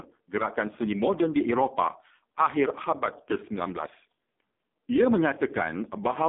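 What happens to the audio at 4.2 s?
At 4.2 s the speech is still passing through the AMR narrowband mobile codec, which affects the clip from start to finish. The codec rebuilds the voice from a coarse vocal-tract model excited by a few pulses per frame, and the heavy damage points to its lowest mode, near 4.75 kbps. The line keeps only about 200 Hz to 3.6 kHz, so the voice sounds thin, muffled and phone-like, with a buzzy, synthetic edge.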